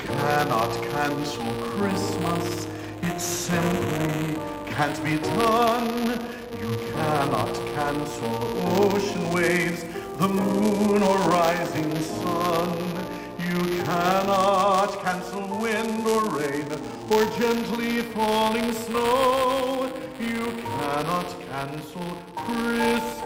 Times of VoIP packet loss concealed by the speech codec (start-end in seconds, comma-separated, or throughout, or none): none